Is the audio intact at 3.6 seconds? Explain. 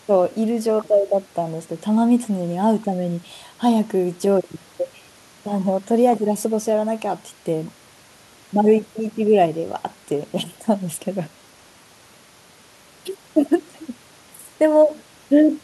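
Yes, the audio is intact at 3.6 seconds, without any dropout, click, distortion or other break.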